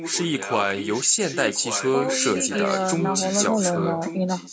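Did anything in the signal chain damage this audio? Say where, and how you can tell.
Yes, at the call-processing stage. There's an echo leak from 0.0 to 2.08 s and again from 2.33 to 4.52 s. A copy of the speech trails 1.13 s behind, roughly 10 dB down. Likely a far-end loudspeaker reaching the mic past an incomplete echo canceller.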